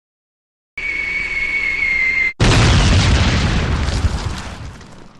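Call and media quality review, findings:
Cut-off start: dead silence from 0.0 to 0.78 s, then the audio kicks in mid-sound with no attack or fade-in. Capture or stream looks to have opened late and dropped the beginning. Probably the recorder or stream start-up path.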